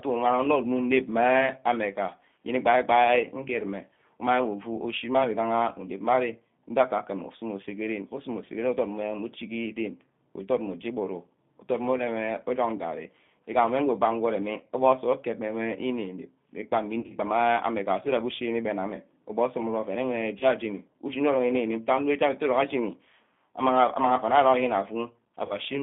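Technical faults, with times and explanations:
Throughout: G.729 codec. The audio is confined to a narrow line band of about 150 Hz to 3.6 kHz, so it sounds thin and boxy. The codec rebuilds each short frame from a vocal tract filter and a few pulses. This gives the speech a plainly audible rough, synthetic edge. The coarse rebuilding points to an 8 kbit/s stream.
17.00–17.12 s, 20.39–20.46 s and 25.45–25.55 s: VoIP packet loss concealed by the speech codec. At each point the decoder fills a gap by stretching its last pitch and filter. The speech briefly turns into a buzzy tone or coloured noise that fades. The first event spans the longest stretch, about 100 ms, with gaps scattered through it. Its longest unbroken gap fits about 40 ms. The others fit about 20 ms and 50 ms. Because each frame builds on the last, the speech stays weak for a moment afterwards.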